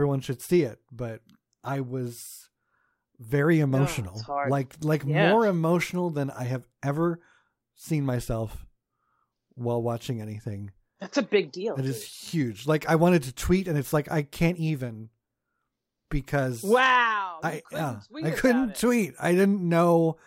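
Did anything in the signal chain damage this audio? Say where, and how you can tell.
No, nothing in this speech recording points to damage at any stage of the signal chain.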